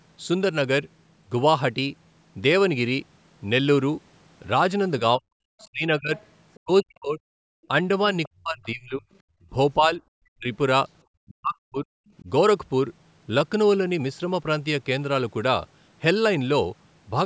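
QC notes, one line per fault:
5.0–7.69 s, 8.27–9.07 s, 9.78–10.47 s and 11.26–12.29 s, speech suppressed in double talk: the echo canceller likely mistook overlapping talk for its own echo and clamped the microphone, so the talker's speech dips by up to around 40 dB, thins and breaks into pieces.
6.16–6.6 s and 8.23–8.68 s, other side's voice leaking through: loudspeaker sound likely escaped the echo canceller's subtraction, so a faint second voice, roughly 25 dB below the talker, slips in as short scraps.
7.55–7.68 s and 9.35–9.5 s, background gated by the echo canceller: the canceller briefly shut the microphone path while the loudspeaker played, so room sound drops out by about 38 dB and about 24 dB respectively, for a moment each, then returns.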